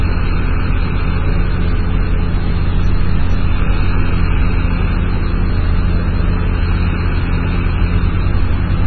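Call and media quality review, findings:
MP3 compression, throughout. Nothing above 5.9 kHz, treble cut flat. Heavy watery, swirly texture and smeared attacks. Likely an MP3 encoder starved of bits, consistent with roughly 16 kbps, dropping weak frequency lines that flicker between frames.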